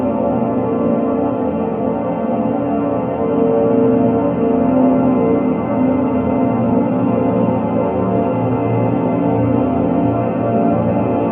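No technical faults can be heard anywhere in these everyday sounds.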